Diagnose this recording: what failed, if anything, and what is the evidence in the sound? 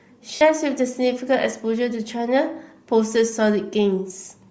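The codec stage is at fault throughout. The speech has a breathy, grainy edge across the whole clip. Upper-band detail sounds replaced by shaped noise. The likely cause is Bluetooth LC3 compression at a low bitrate. That fits about 32 kbps with 10 ms frames. The encoder zeroes much of the upper spectrum and fills it with noise.

The transport stage failed briefly. From 0.35 to 0.41 s, about 60 ms, audio frames are missing. These are lost LE Audio frames. The decoder reused the last spectrum with random signs to cover the gap. The length fits six lost 10 ms frames.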